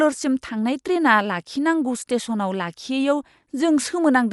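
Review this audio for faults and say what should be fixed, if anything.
Throughout the speech the sound is dull and cut off, with nothing above 11.5 kHz and a rough, fluttering noise around voiced tones, most likely from Dolby Digital compression at a low rate, which fits about 64 kbps. The encoder narrows the band and gives many frequency lines no mantissa bits, so the decoder fills them with dither noise. A spectrogram shows a hard ceiling at 11.5 kHz and grainy, speckled patches between harmonics. Encode from the original at a higher bitrate.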